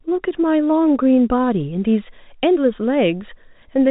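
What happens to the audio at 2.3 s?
Nothing goes wrong at 2.3 s: the speech carries on intact through that moment, with only the narrow, band-limited sound of its telephone coding.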